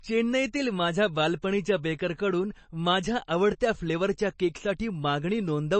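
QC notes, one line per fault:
Throughout: MP3 compression, plainly audible, with nothing above about 8.3 kHz; the speech sounds watery and swirly, with s sounds chirping, likely from a low bitrate near 32 kbps. A spectrogram shows a hard ceiling at 8.3 kHz and flickering, patchy detail beneath it.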